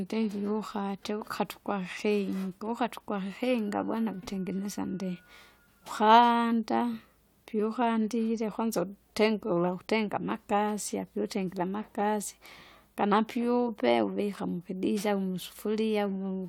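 No dropouts, clicks, distortion or other technical faults turn up anywhere in this speech recording.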